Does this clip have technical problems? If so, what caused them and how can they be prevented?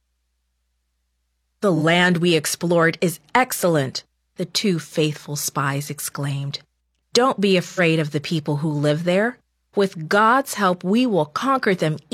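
Yes. AAC frame loss with concealment at 1.76–1.82 s and 7.63–7.80 s: compressed frames never reached the decoder, which rebuilt each gap from the last good spectrum, leaving brief smeared, phasey patches. The 43 ms and 85 ms gaps fit one and two lost frames. To prevent it, send the stream over a more reliable link or add forward error correction or retransmission.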